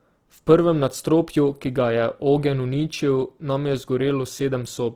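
Throughout, the speech sounds grainy and rough, with noise filling the highs. It is likely Opus compression in music mode, short of bits, near 16 kbps.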